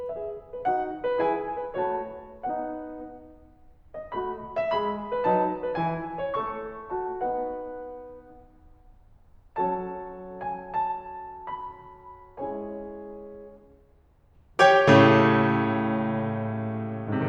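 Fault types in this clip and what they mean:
Nothing stood out as a technical problem on listening to this music.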